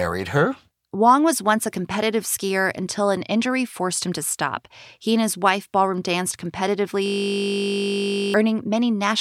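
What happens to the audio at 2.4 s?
Nothing goes wrong at 2.4 s; the speech carries on intact through that moment.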